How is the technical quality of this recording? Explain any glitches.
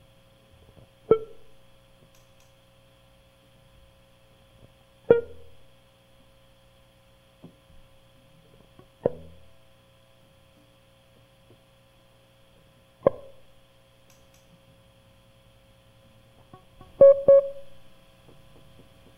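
The recording has one clear glitch near the end. A doubled audio track appears from 16.80 s to the end: the music is suddenly mixed with a second copy trailing it by about 300 ms at about the same level, likely from a slower capture path or an edit leaving two copies out of step. It sounds like a dry, full-range slapback echo with no decay that starts abruptly.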